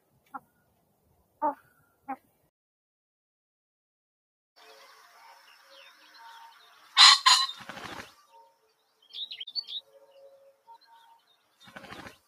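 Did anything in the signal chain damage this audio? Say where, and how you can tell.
Yes. Throughout, the level pumps and flutters by around 5 dB, with sustained parts and tails sinking while onsets come through. That is a noise suppressor applied to music or sounds in the call processing stage, treating steady material as noise and repeatedly turning it down.

Sound cut by the noise suppressor is heard at 0.02–2.46 s, 8.09–8.72 s and 9.81–12.2 s, where parts drop by about 20 to 21 dB, for roughly a second and a half, under half a second, and a second and a half. The suppressor misread that sound as noise and attenuated it.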